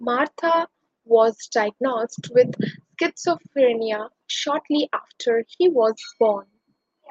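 No technical faults can be heard in the speech. It has passed through a call path, and its high end stops at about 8 kHz, which fits a wideband call codec such as Opus.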